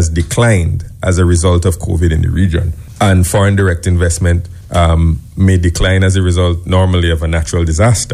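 No technical faults can be heard anywhere in the audio. There is nothing here that needs a time or a cause pinned to it.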